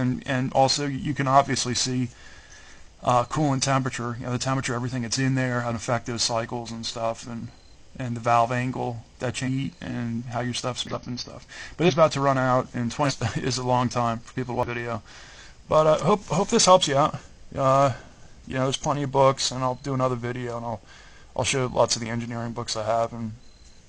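Between 9.43 and 14.69 s the audio lurches forward five times, at 9.43–9.49, 10.87–10.98, 11.85–11.92, 13.01–13.12 and 14.63–14.69 s. Each jump loses a chunk of material, around 0.2 to 0.4 s. These are compressed frames skipped: whole frames never reached playback, missing or rejected by the decoder as damaged.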